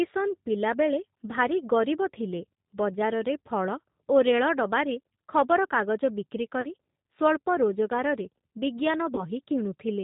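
Throughout the speech, the G.729 codec is plainly audible. The sound is band-limited with nothing above 4 kHz, and has the slightly rough, synthetic texture of speech rebuilt from a vocal tract filter, a pitch predictor and a few pulses per short frame, which fits an 8 kbit/s G.729A stream. Unlike plain low-pass filtering or a low sample rate, the damage is in the texture as well as the bandwidth.

At 6.61 to 6.67 s, just after "ରେଳଡବାରେ ଖବରକାଗଜ ବିକ୍ରି", comes VoIP packet loss concealed by the speech codec, and it happens again at 9.15 to 9.26 s. Each time about 30 ms of audio is missing, which fits a single lost packet. The decoder fills the gap by extending its last pitch and filter into a buzzy tone or coloured noise that fades. Because each frame builds on the one before, the weakened, distorted sound persists after the gap, so the disturbance lasts about 56 ms and 112 ms. That lingering recovery distinguishes it from a simple dropout or click.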